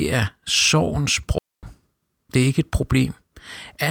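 At 1.38 s the speech drops into a digital wireless dropout lasting about 0.25 s, to 1.63 s. The receiver lost too much of the link's data and muted itself behind a very fast fade. The result is a clean gap of near silence, with no noise burst on either side.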